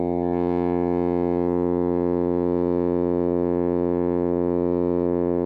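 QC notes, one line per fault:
No faults to note in this music clip.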